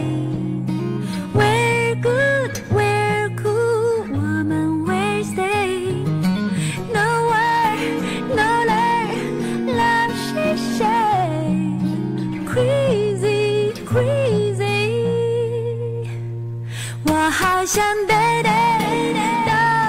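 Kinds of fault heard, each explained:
No dropouts, clipping, distortion, timing or level problems are audible anywhere in this recording.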